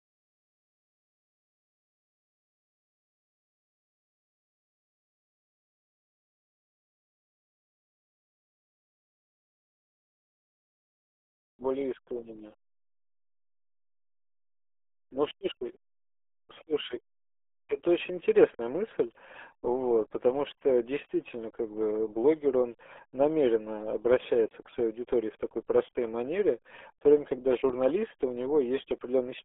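From start to finish the speech carries heavy RealAudio 14.4 codec damage. Nothing passes above about 3.7 kHz, and the band sits near 300 Hz to 3.4 kHz. Coarse low-rate coding, consistent with an 8 kbit/s stream, leaves the speech muffled and gargly.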